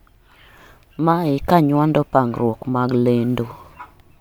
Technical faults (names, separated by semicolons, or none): none